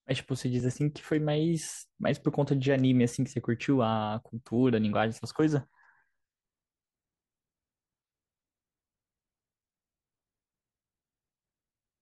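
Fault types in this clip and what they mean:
Clock drift buffer slips: Regular clicks every 3.01 s from 0.60 to 9.60 s. Likely two drifting clocks forcing small sample blocks to drop or repeat.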